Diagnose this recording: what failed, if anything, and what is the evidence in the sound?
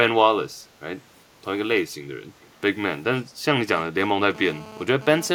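At 2.41 to 2.46 s a faint, delayed copy of the speech returns about 414 ms late, far below the direct signal. The stage is call processing: this is likely an echo leak, a far-end loudspeaker's echo canceller passing residue. A spectrogram would show a faint, shifted smear.

From 3.77 to 5.30 s a hard, raspy GSM phone buzz at 217 Hz sits about 18 dB below the signal, intermittent as in a data transfer. Analogue wiring rectifies the handset's radio bursts, giving evenly spaced harmonic lines on a spectrogram and pulse trains in the waveform.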